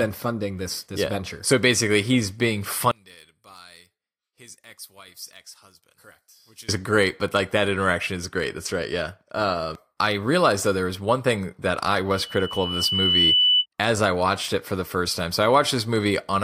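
From 2.91 to 6.69 s, after "basically he's being", the speech drops by about 22 dB, a sunken stretch on the waveform, likely one channel inverted and cancelling in mono. From 12.12 to 13.66 s, after "one thing that I", a loudspeaker feedback squeal at 3 kHz builds over about a second to a few dB above the speech, a bright horizontal line on the spectrogram.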